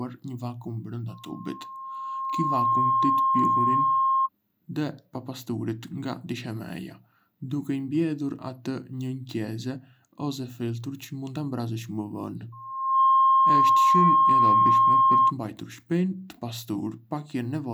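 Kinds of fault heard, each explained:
Loudspeaker feedback squeal: The microphone picks up its own loudspeaker. A 1.1 kHz tone runs away. It swells twice, rising well above the speech.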